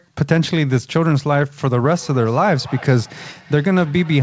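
From 1.8 s on, feedback echo between two devices plays the speech back roughly every 300 ms, about 22 dB down: faint, evenly spaced spectrogram smears trailing each syllable.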